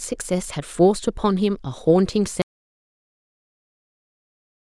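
At 2.42 s the speech cuts out and the clip stays in complete silence to the end, an audio dropout to silence. The input was likely lost while the recorder kept writing silence, so no room tone remains. The waveform flattens to a dead line and the spectrogram goes blank.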